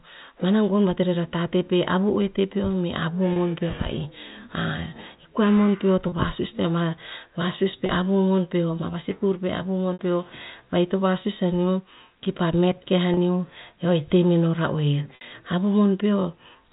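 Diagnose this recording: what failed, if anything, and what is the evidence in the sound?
Network stage, packet loss with pitch repetition: short held, buzzy patches at 3.33, 6.09 (after "koa mon peo to"), 7.86 (after "vasus pe"), 9.93, 13.14 and 15.15 s (after "ra oer"). The receiver bridges each gap by repeating the last pitch period. The gaps last 30 ms, or 60 ms at 9.93 and 15.15 s, which fits one or two lost packets.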